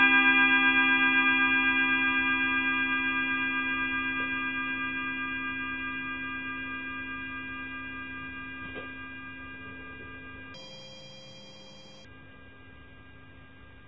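From 10.54 to 12.05 s, a wrong sample rate doubles playback: speed doubles and pitch rises 12 semitones. A spectrogram shows harmonics stretched upward by an octave.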